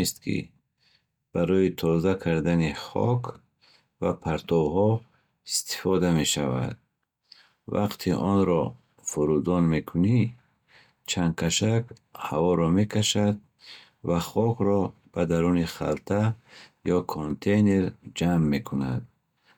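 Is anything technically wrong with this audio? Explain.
Yes. From 17.14 to 17.30 s the speech falls abruptly by about 6 dB, likely because one channel drops out of the mono sum. Unlike a full dropout, the sound never goes silent.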